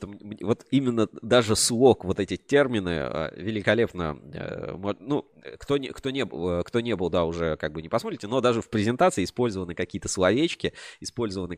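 A speech recording, and nothing in it points to a technical fault. No dropout, distortion or other problem can be heard anywhere in the clip.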